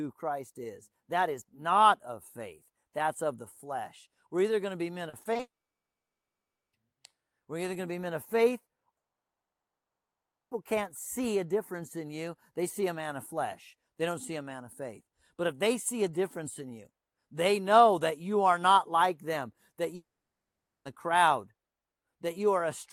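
Right after "going to be men", from 5.09 to 5.41 s, the speech turns choppy and robotic: repeated packet loss punches four short holes into the stream, the longest 40 ms. Together they make up 100 ms, about 31% of that span. Each is patched by repeating the last sound, which gives a choppy stutter. On a spectrogram this shows as smeared, copied columns broken by brief gaps. In the waveform the envelope looks jagged and notched.

At 5.41 s the stutter runs straight into a long network dropout that is likely the cause of what follows. A brief concealment tail gives way to 1.26 s of silence, and speech resumes at 6.75 s with the middle missing. After "be men of faith" the audio stops dead at 8.97 s. It stays flat and silent for 1.54 s, again likely a long network dropout, and returns at 10.53 s on "can't see a difference". A third gap follows "not like them that", from 19.95 to 20.87 s, where a short fading tail leads into 0.82 s of silence, likely the same kind of dropout. 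Each of these appears as a flatline in the waveform and an empty block on the spectrogram.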